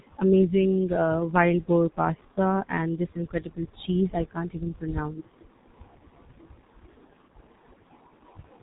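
It's a speech clip squeezed through a G.723.1 codec the whole way through, and it's heavily damaged by it. Nothing gets above 3.8 kHz, so it's muffled, and the slow-updating voice model leaves it hoarse with smeared consonants, which fits a bitrate around 6 kbit/s.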